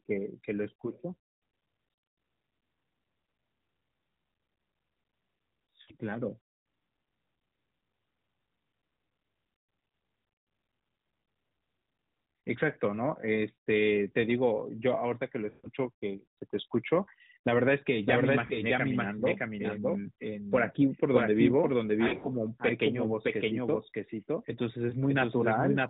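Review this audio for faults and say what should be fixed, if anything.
Lost AMR speech frames: bit errors on the radio link caused frames to fail their checksum, so the decoder filled each gap by repeating its last good pitch and vocal-tract settings at falling gain. This produces a short dip or warble at 24.90–24.95 s (20 ms) and at 18.46–18.57 s (40 ms), and a longer smear at 5.82–5.91 s (60 ms). The worst loss is at 15.50–15.70 s: 140 ms of sound stretches and fades toward silence, then returns rough for a moment. At 22.08–22.28 s about 100 ms is lost in short bursts, none longer than 40 ms, which gives a series of short dips or warbles. To prevent this, improve the radio link or add channel protection and redundancy so that corrupted frames are rarer and shorter.

Doubled audio track: from 18.06 s to the end, a second full-band copy of the audio runs about 0.7 s behind the original at roughly the same level. 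It has no decay or room colouring, and it cuts in abruptly. The likely cause is a second capture through a slower path, such as monitoring or loopback feeding back into the mix, or an edit that left two misaligned copies. Every phrase is heard twice, which muddles the last several seconds. To prevent this, route only one source into the recording and mute any return or monitor path.

The sound is narrowband throughout, with nothing above 4 kHz and only light codec roughness, which points to AMR-NB at 12.2 kbps.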